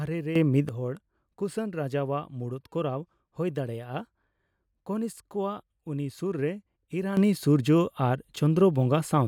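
At 0.36 s the speech and its background noise jump up together by about 10 dB, then drop back at 0.69 s. The same sudden gain jump returns at 7.17 s and holds to the end. The likely cause is a gain step applied without a ramp.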